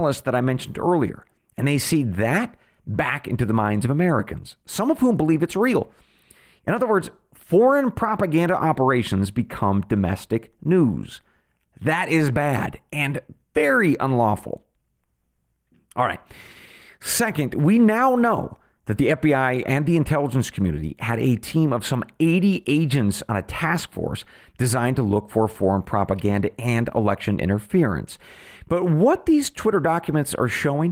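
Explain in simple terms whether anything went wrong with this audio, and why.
Nothing went wrong with this audio, so there is no problem here to explain.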